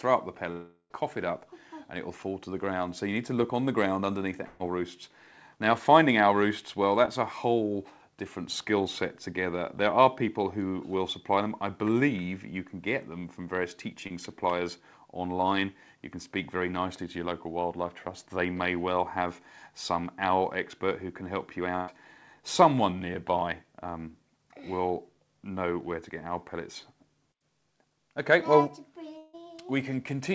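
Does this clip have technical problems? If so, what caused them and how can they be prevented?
Yes. Long network dropout at 0.52–0.92 s and 29.18–29.35 s: the audio stops arriving and the receiver stretches the last sound into a fading buzz. In the first, about 380 ms is filled that way before a brief silence of roughly 60 ms, and the lost stretch never returns. These are likely caused by the connection stalling outright. A steadier network path, such as wired rather than congested wireless, prevents them.

Burst of packet loss at 4.46–4.61 s and 21.76–21.90 s: about 140 ms and 120 ms of audio go missing. The receiver holds the last sound and lets it decay as a buzz or hiss, then jumps ahead without the missing section. Reducing network congestion or enabling redundancy or forward error correction prevents this.

Short concealed packet loss at 7.05–7.09 s and 14.07–14.12 s: roughly 20 ms fails to reach the decoder in time each time. 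The gap is bridged by extrapolating the preceding sound, which leaves a brief smear or wobble where it blends back. A slightly deeper jitter buffer prevents it.

The call codec's band limit, with nothing above 8 kHz, fits G.722.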